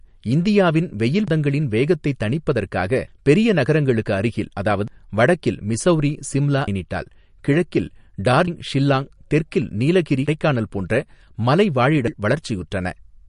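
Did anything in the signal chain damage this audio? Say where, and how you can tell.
Yes. The whole clip has a watery, swirly texture with smeared consonants, and nothing survives above 10.5 kHz. This points to MP3 compression at the codec stage, at a low bitrate around 44 kbps: the encoder cut the treble and zeroed weak frequency lines, which flicker from frame to frame.

The speech skips abruptly at 1.28, 4.88, 8.48 and 12.08 s, every 3.6 s, with no gap of silence. Each time roughly a fifth of a second is lost. The likely cause is audio missing between chunks at the buffer stage, dropped while the recorder closed one chunk and opened the next.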